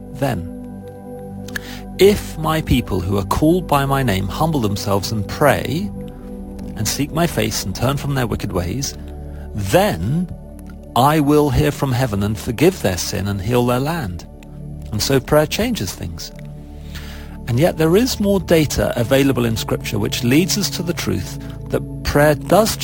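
Throughout the audio there is imaging from sample-and-hold upsampling: a bright, metallic fizz in the 11.03 to 22.05 kHz band, about 21 dB below the main sound. It fits a roughly 22 kHz signal raised to 44.1 kHz by repeating samples without a smoothing filter. Unlike steady hiss, the fizz rises and falls with the sound. Unlike aliasing, its mirror copies sit mainly above the original band.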